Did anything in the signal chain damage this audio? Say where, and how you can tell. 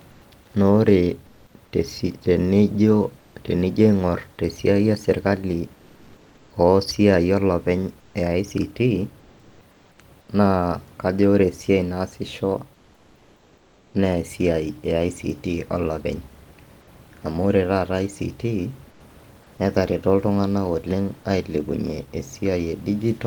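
Yes, at the codec stage: comfort noise in place of the background. In pauses at 0.11–0.21, 3.19–3.35, 5.75–6.50, 8.00–8.14, 9.19–9.60, 9.71–9.98, 12.74–13.93 and 18.90–19.00 s, the room noise turns steady and featureless, shifting about −4 to +2 dB. The likely cause is Opus discontinuous transmission, where the sender stops and the receiver synthesises noise.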